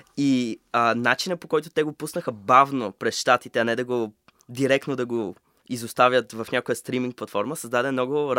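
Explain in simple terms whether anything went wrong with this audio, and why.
Nothing went wrong; this speech recording has no faults.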